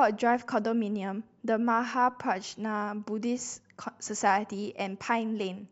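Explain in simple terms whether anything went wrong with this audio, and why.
Nothing went wrong that a listener would notice: the speech in this clip comes across steadily, and nothing stood out as a problem at any point.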